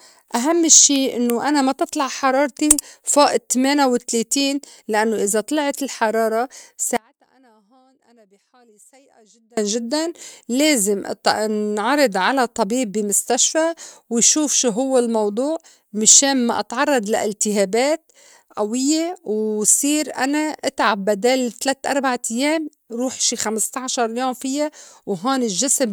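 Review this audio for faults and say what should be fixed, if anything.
Hard clipping occurs from 0.72 to 0.85 s, just before "إنّو أنا ما تطلع". The speech peaks there drive a stage about 5 dB past what it can pass. The tops of the waveform are cut flat. Those flat tops add harmonics high in the spectrum, heard as a brief harsh crackle on the loud syllables. To prevent it, set the input gain lower or use a limiter ahead of the converter so peaks keep headroom.

An audio dropout to a faint residue runs from 6.97 to 9.57 s, about 2.6 s long. It begins right after "لإنّو إذا طلعت الحرارة" and ends just before "جدّاً لازم". The speech cuts out abruptly, not as a pause or fade. Only a faint trace of sound remains in the gap, roughly 35 dB below the normal level. The path after the break stayed live. The likely cause is a brief loss of the source feed, such as a failing connection or a stalled stream. 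To prevent it, secure the cabling and monitor the feed so a break is caught during recording.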